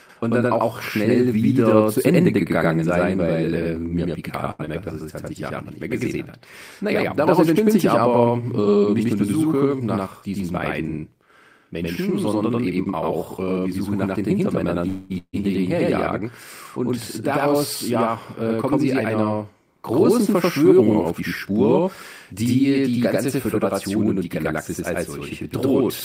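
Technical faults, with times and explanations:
Throughout: channel delay (doubling). Every sound is followed by a same-level copy about 93 ms later, heard as a slap echo or doubled speech. One channel runs late by a long buffer, which fits a 4096-sample delay, and both channels are summed to mono.
4.51 to 4.61 s: short stall from a late packet. A sound is held for about 77 ms with a faint buzz or dip, then carries on from where it stopped. A packet arrived late, the jitter buffer emptied, and the receiver stretched the last sound until it came, so nothing is lost.
4.65 to 4.69 s: short concealed packet loss. A brief smear or wobble follows straight after the stall. About 40 ms of audio never reached the decoder in time. The receiver filled the gap by continuing the last sound and blending back, and a short consonant here may disappear.
9.49 to 10.15 s, 16.97 to 19.22 s, 20.33 to 22.43 s: jitter buffer speed-up. 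Speech runs faster at an unchanged pitch, about 10% faster after "äh nicht nur die" up to "diesen beiden", then 5% and 4% faster, the last ending before "die ganze". The buffer held too much audio, so the receiver trimmed short pitch-period slices repeatedly, dropping roughly 70 ms in the first run and 100 ms in each later one.
14.88 to 15.12 s: call audio freeze. The last sound continues as a buzz or hiss that fades for about 221 ms, then speech resumes exactly where it stopped, with nothing missing. Likely cause: packets held up on the network so the jitter buffer ran dry, putting a gap into the audio.
15.18 to 15.35 s: long network dropout. A short fading buzz or hiss gives way to about 70 ms of silence before the speech returns at "ihnen herjagen", with about 160 ms of audio gone. Likely cause: a stretch of packets never arrived, so that part was never played.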